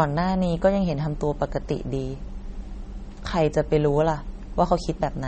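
MP3 compression throughout, likely an encode near 32 kbps: treble stops at 8.4 kHz and weak frequency lines flicker, leaving the speech audibly watery.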